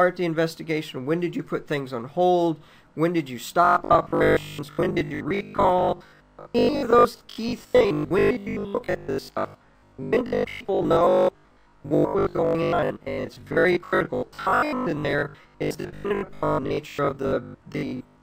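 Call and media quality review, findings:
Rigid, metallic 50 Hz buzz from 3.65 s to the end at 18.22 s, robotic sound from repeated short buffers: likely starved playback looping a 20 ms buffer, replacing most real audio.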